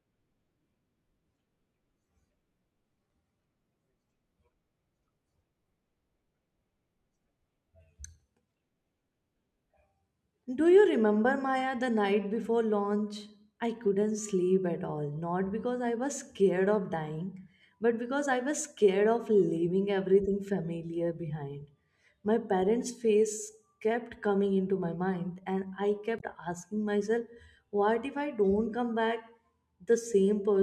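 Speech clip with a brief burst of damaged data in a compressed stream from 26.17 to 26.23 s, after "my mind and I" and before "asking myself." The decoder misreads corrupted frames and resyncs.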